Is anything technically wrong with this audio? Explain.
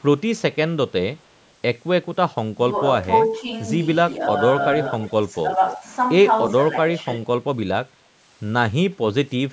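Yes, there are two problems with this speech.

Echo leak shows up at 1.18 to 1.5 s, 4.6 to 5.09 s and 5.7 to 5.77 s: a delayed copy of the voice trails about 0.29 to 0.31 s behind. It's barely there the first time and clearly audible from 4.6 s. It's likely a far-end speakerphone whose echo canceller let some of its own playback slip back down the line.

Speech suppressed in double talk hits at 2.55 to 2.71 s, 3.28 to 3.48 s, 5.29 to 5.84 s and 7.0 to 7.28 s. The voice briefly dips, slightly at 3.28 s and 5.29 s, more noticeably at 2.55 s, and most deeply at 7.0 s. That's likely an echo canceller turning everything down while both sides overlap.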